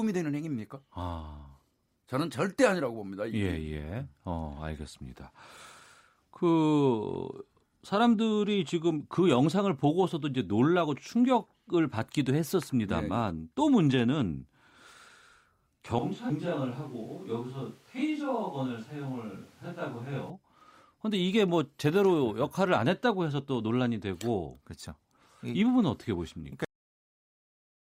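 At 15.99 s the speech turns suddenly roomy and hollow, thinner in the bass and roughly 5 dB quieter, with background noise rising to around 30 dB below the speech. This is a switch to a distant microphone, likely because the close microphone's feed dropped and a farther pickup, such as a camera's, took over. It lasts until 20.3 s, when the closer sound returns just as abruptly. On a spectrogram the low end thins out and a diffuse reverberant haze fills the gaps between syllables. The waveform's envelope drops in height and loses its sharp edges.

Within that stretch, from 16.29 to 16.33 s, the sound jumps forward with a small blip. This is a stream segment skipped, likely because one segment of a segmented stream failed to load and playback carried on with the next. Some of the programme is missing. The waveform shows a hard discontinuity, and the spectrogram shows a thin vertical broadband line where the two pieces are spliced together.

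At 26.65 s the audio has a cut-off end. The final buffers were never written or played, so the speech stops in the middle of a sound and falls straight into digital silence with no decay. The waveform shows a flat line for the remaining second or so. On the spectrogram the energy ends in a sharp vertical wall.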